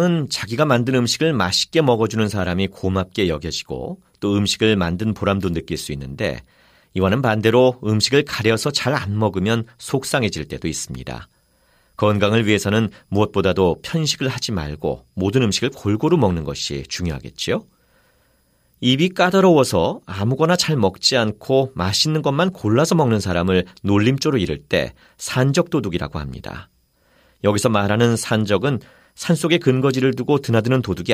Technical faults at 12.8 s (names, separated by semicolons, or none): none